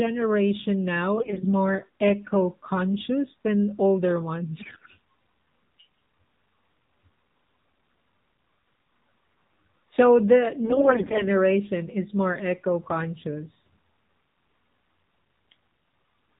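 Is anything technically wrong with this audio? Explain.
Yes. The speech has been through a low-rate AMR narrowband mobile codec, and it also has three short bursts of AMR bit errors.

AMR narrowband mobile codec, throughout: the vocal-tract model rebuilds the speech from sparse pulses at a low rate, consistent with the 7.4 kbps mode, so it sounds buzzy and synthetic. A spectrogram shows a hard ceiling at 4 kHz with nothing above it.

AMR bit errors, at 1.16–1.47 s, 4.60–4.91 s and 10.63–11.25 s: roughly one bit in five of the weakly protected bits flipped, misplacing excitation pulses. Pitch and level hold, but the sound turns hoarse and gargly. The spectrogram shows smeared, noisy harmonics while the waveform envelope barely changes.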